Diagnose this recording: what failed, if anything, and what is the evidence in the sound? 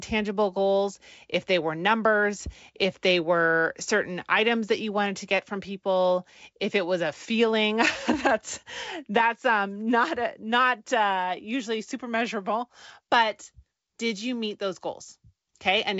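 Nothing failed in this recording.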